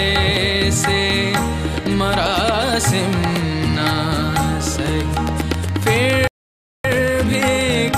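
A train of clicks runs from 4.86 s to the end, a regular ticking at about 7.4 per second, each pulse peaking well above the surrounding sound and audible through quiet passages as well. On a waveform it shows as evenly spaced thin spikes. On a spectrogram it shows as a row of narrow vertical lines reaching across the whole frequency range. Near-identical, regularly timed pulses like this most likely come from electrical interference or a faulty connection or power supply. Within that stretch there is also a playback stall from 6.27 s to 6.85 s. The sound cuts out abruptly mid-flow for about 0.57 s before resuming. The waveform drops to a flat line for that gap, and the spectrogram shows a clean blank column with hard edges on both sides. The player was likely starved of data or blocked until it recovered.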